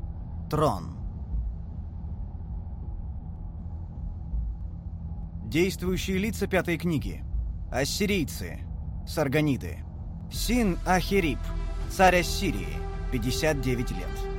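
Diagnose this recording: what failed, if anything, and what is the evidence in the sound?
A regular click every 0.62 s from 0.25 s to 13.95 s, about twenty in all, points to clock drift buffer slips at the buffer stage. Two devices' clocks likely differ by a few hundred ppm, so a few samples are dropped or repeated. Random dropouts lack this steady spacing.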